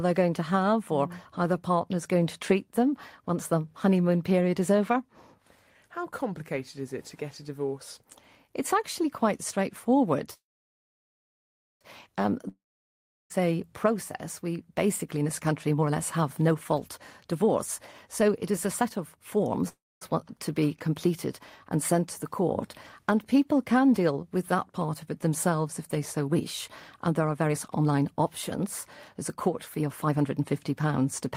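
Speech recording. After "actually quite straightforward", a call audio freeze runs from 10.33 to 11.83 s: the last sound trails into a fading buzz or hiss, then about 1.4 s of silence. Another brief freeze follows at 19.68–20.03 s. Both likely come from delayed packets draining the jitter buffer, with nothing lost. A long network dropout from 12.49 to 13.32 s fades to silence before "a process", and about 0.8 s is missing. Jitter buffer speed-up hurries the speech without changing pitch. It runs at 118% from 15.04 to 19.65 s, and at 119% from 26.27 to 31.01 s after "themselves if they so". Roughly a second is trimmed each time.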